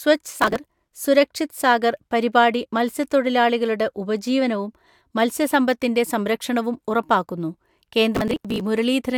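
A gritty burst of crackle tears through the speech from 0.40 to 0.56 s, just before "സുരക്ഷിത് സാഗർ പരിപാടി മത്സ്യത്തൊഴിലാളികളുടെ", and again, longer, from 8.15 to 8.61 s. This is processor overload crackle: the processor repeatedly missed its deadlines for buffers of around 10 ms, and each missed buffer was skipped, leaving a run of hard-edged gaps.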